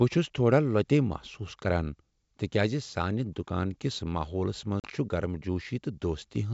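At 4.80 s a hard-edged silent hole opens, and the speech returns slightly distorted until 4.87 s. This is packet loss on an ADPCM call: 40 ms dropped, throwing the decoder's predictor and step size out of step.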